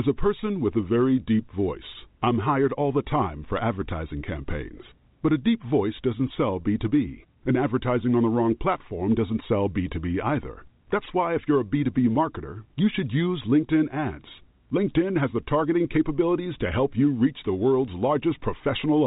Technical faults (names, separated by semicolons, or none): none